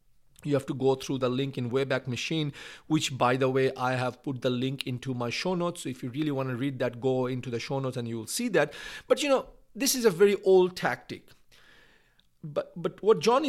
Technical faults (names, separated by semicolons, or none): none